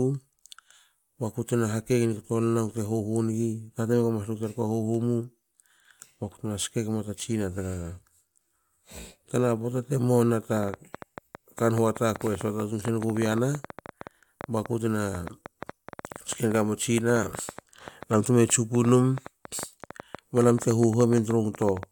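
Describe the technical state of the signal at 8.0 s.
At 8.0 s the speech is intact, with no dropout, clipping, glitch or other technical fault at that moment.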